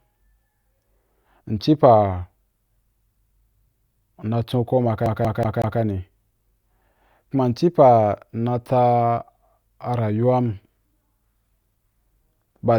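At 5.06 s, right after "nna chon kuma", the speech locks into a CD stuck on one turn. A scratch knocks the laser back one track each time the disc comes round. The same slice of about 0.19 s plays four times, with a brief mute at every jump back. The result is a quick, even stutter that runs until 5.80 s. Then playback moves on. Nothing new is heard during the loop.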